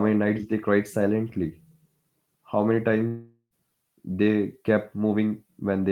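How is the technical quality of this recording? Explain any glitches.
There is one glitch, a long network dropout, from 3.07 to 3.54 s. The last sound stretches into a fading buzz and then about 70 ms of silence, likely because audio packets stopped arriving. Speech resumes with roughly 440 ms missing. On a spectrogram this appears as smeared, decaying bands followed by a blank gap.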